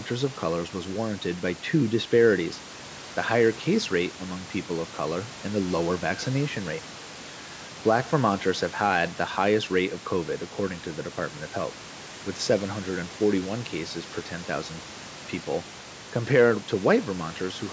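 The speech comes through with no technical faults, carrying the ordinary band limit of call microphone processing, with nothing above 8 kHz, and a room noise sitting about 21 dB below the speech.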